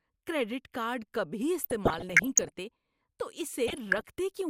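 Speech with DAB burbling at 1.61–2.50 s, just after "کریڈٹ کارڈ کبھی", and again at 3.67–4.09 s: noise blips and sub-band jumps where bit errors of around half a percent slipped past error correction, corrupting MP2 samples and scale factors frame by frame.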